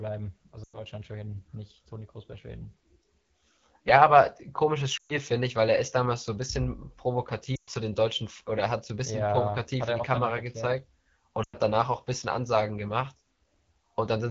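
Throughout, the speech carries the AMR wideband (HD Voice) codec at a plainly audible level. Bandwidth reaches about 7 kHz, so it is clearly wider than narrowband telephone audio, but the top band above 6.4 kHz is only shaped noise, and the voiced sound is rough and raspy. That roughness fits one of the two lowest AMR-WB rates, around 8.85 kbit/s, where the pulse-driven vocal tract model has too few bits.

Lost AMR speech frames break in at 0.63–0.80 s, 4.97–5.18 s, 7.55–7.69 s and 11.43–11.56 s, each lasting roughly 100 to 120 ms, which fits runs of five or six 20 ms frames. The decoder repeats the last good pitch and vocal tract settings at falling gain, so the speech drops to near silence within two frames, then returns weak and rough. This is a decaying fade into a near-silent gap rather than a click.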